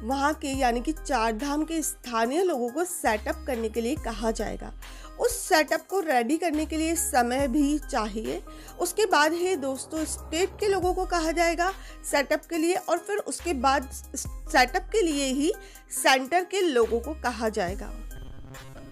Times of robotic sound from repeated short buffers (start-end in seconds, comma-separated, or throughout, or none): 18.16-18.91